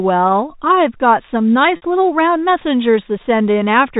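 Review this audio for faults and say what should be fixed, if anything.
Packet loss with pitch repetition at 1.76 to 1.82 s: about 60 ms went missing, which fits three 20 ms packets. The receiver looped the last pitch period, giving a brief held, buzzy sound. A spectrogram shows harmonics frozen into flat lines. The waveform shows identical cycles shrinking before normal sound resumes. A deeper jitter buffer or forward error correction would prevent it.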